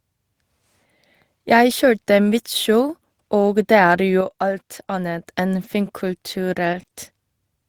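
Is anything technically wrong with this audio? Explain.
Yes. Speech is interrupted by three kinds of fault. After "og det er", from 4.21 to 5.26 s, a sudden gain jump drops speech and background together by about 6 dB, likely an unramped digital gain change. The waveform shows a step-shaped envelope drop. At 5.63–5.65 s (20 ms) and 6.73–6.79 s (40 ms), there is a lost packet rebuilt from error correction: lower-bitrate copies replaced the missing audio, sounding rough and noisy, with smeared, grainier spectrogram texture. From 6.81 to 6.93 s, a short concealed packet loss lets the decoder extrapolate the preceding sound, producing a wobbly smear.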